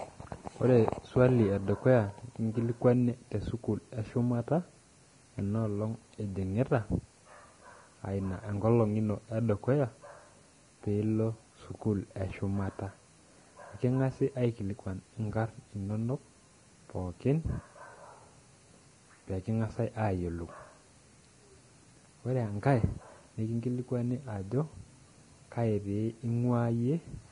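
From start to finish the speech has no content above about 10.6 kHz, and the treble below that edge is grainy and hissy, with sibilants turned to coarse noise and attacks smeared. The damage is heavy, which fits a bitrate around 30 kbps. This is likely Vorbis compression, where coarsely quantised residue over a smooth spectral floor turns fine detail into noise. A plain low-pass filter would only dull the sound, while an MP3-style codec would add chirpy, warbling artefacts instead.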